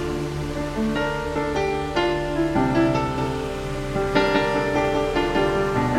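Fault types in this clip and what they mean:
Doubled audio track: from 3.18 s to the end, a second full-band copy of the sound trails about a fifth of a second behind, roughly 5 dB quieter, likely from a slower second capture path. Unlike echo or reverb, it starts abruptly, repeats once, and has no decay or room colour.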